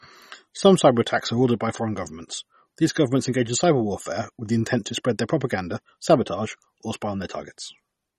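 Throughout the speech the top end stops dead at 12.4 kHz, and the sound has a watery, swirling quality, with sibilants turning metallic and chirpy and consonant onsets smeared. This is likely MP3 compression at a starved rate that fits roughly 32 kbps: the encoder drops the treble and zeroes quiet frequency lines, which flicker on and off between frames. A spectrogram shows a hard ceiling at 12.4 kHz and speckled, patchy holes in the upper bands.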